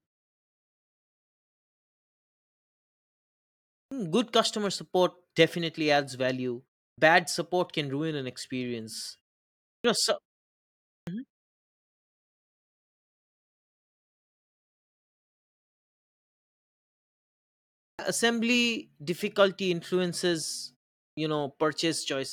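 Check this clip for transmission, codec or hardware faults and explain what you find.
There's one problem here: clipped start after a pause, at 3.86, 6.92, 9.78, 11.01, 17.93 and 21.11 s. The output device dozes off in the gaps, so each phrase loses its first 55 to 64 ms and starts abruptly, without its opening sounds.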